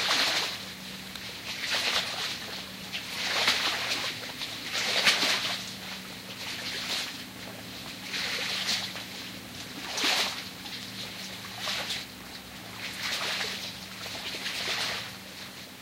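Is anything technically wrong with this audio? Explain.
No, the recording of these sounds has no technical faults to point to.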